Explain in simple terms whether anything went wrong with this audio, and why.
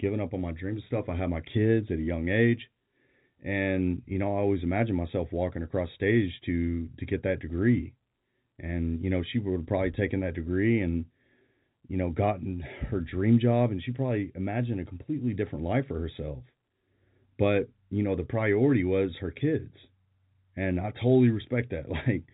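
Nothing went wrong here.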